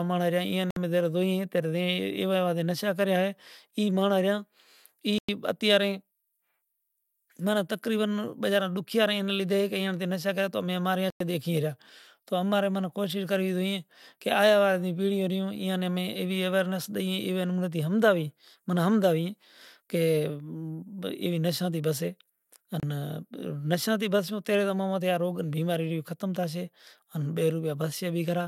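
Audio packets most likely failed to reach the headphones in time and were discarded, a Bluetooth dropout. The speech cuts to silence at 0.71, 5.18, 11.10 and 22.80 s for 58, about 100, about 100 and 29 ms, then resumes further along.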